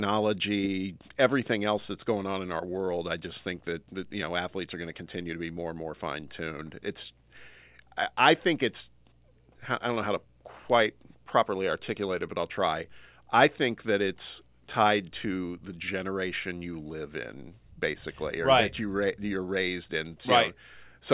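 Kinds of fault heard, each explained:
No technical fault can be heard anywhere in the speech. No dropouts, clicks, distortion or other disturbances appear in the recording.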